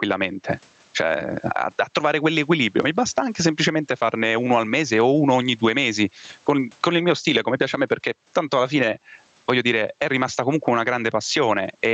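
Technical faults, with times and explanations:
Throughout, gain pumping: the gain swings by roughly 15 dB, so loud and soft parts sit close in level and the speech sounds squashed. The likely cause is input gain set far too high, with a fast limiter or compressor clamping each peak. The waveform looks flattened.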